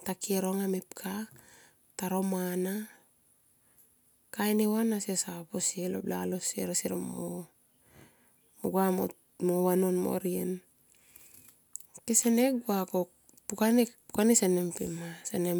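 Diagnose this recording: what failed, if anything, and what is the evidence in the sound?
Nothing in the chain betrays a failure: the speech signal comes through intact, with no audible fault at any stage from capture to playback.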